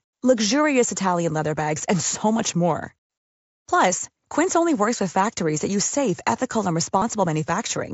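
Speech over a Bluetooth headset link carried by the wideband mSBC codec. From 6.98 to 7.02 s, concealed Bluetooth headset packet loss fills a 37.5 ms gap. It fits a short run of lost frames. The receiver repeats recent waveform, giving a brief buzzy hold and a slight warble as real audio resumes.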